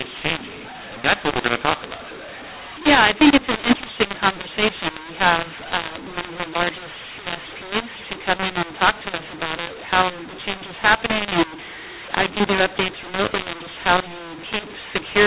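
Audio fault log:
Throughout: mu-law and A-law mixed up. G.711 A-law speech is decoded as mu-law, so each 8-bit code maps to the wrong level. Loud and soft samples are scrambled and the quietest are lifted well above silence, giving harsh distortion and noise-filled pauses.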